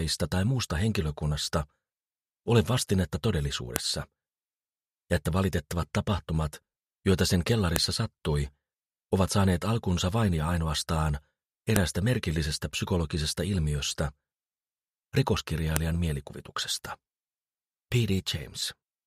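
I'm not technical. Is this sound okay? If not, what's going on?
No. A file header played as audio causes sharp clicks at 3.76, 7.76, 11.76 and 15.76 seconds, every four seconds. The sound was joined from four-second pieces, and each piece's leftover file-information bytes play as a brief loud snap.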